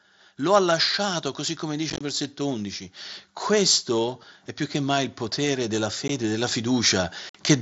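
From 0.37 to 2.88 s, automatic gain rising lifts the level by about 5 dB as the control decides the input is too quiet. Speech and background swell together, and the waveform envelope visibly widens across those two and a half seconds. Inside that rise, at 1.90 to 2.01 s, unconcealed Bluetooth headset packet loss removes 60 ms of audio scattered over about 105 ms, the longest gap 22.5 ms. The holes sound like a rough, chopped voice, and a spectrogram shows thin vertical blank strips with hard edges, which fits dropped 7.5 ms mSBC frames over a wideband link that otherwise carries speech up to 8 kHz with light graininess. A second automatic gain rise runs from 3.47 to 7.18 s, about 8 dB this time, giving a slow, steady swell of the whole sound. A single 15 ms dropout hits at 6.08 s, a brief gap. From 7.29 to 7.35 s, 52.5 ms more is lost, a short choppy break that appears as a clear blank column on the spectrogram.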